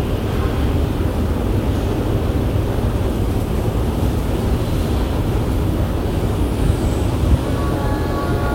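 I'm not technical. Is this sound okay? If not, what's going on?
No. From 7.35 s to the end, the sound runs 6% fast and about a semitone high. Likely cause: a drift correction step, where clock-matching software suddenly sped playback up.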